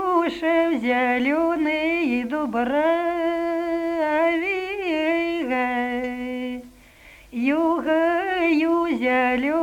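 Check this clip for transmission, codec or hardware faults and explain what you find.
No faults found on listening; nothing to flag.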